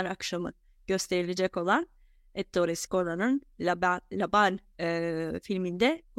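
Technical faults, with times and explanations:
No technical faults found in this speech recording.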